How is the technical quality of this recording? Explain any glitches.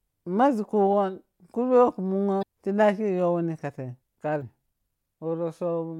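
Two brief glitches mar the speech. Both come from damaged data in a compressed stream, at 2.39 to 2.43 s and 4.38 to 4.42 s. Corrupted bytes made the decoder misread frames and lose sync. Each is a short chirp, squawk, click or hole.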